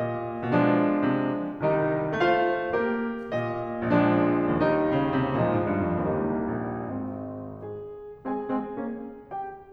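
At 8.56 to 8.60 s the music jumps forward. This is a case of compressed frames skipped. Whole frames of the encoded stream never reached the output. Either they were missing from the file or the decoder rejected them as damaged. About 30 ms of the music is lost. The gap matches a whole number of codec frames. The music lurches ahead at the join.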